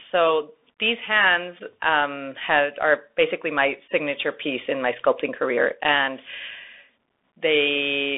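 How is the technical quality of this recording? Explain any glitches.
Poor: the speech is narrowband and plainly degraded from start to finish by headset-style coding. Bluetooth CVSD headset codec, throughout: each sample is coded as a single up-or-down bit with an adaptive step, leaving nothing above 3.8 kHz, scratchy s sounds, granular hiss and distorted loud peaks.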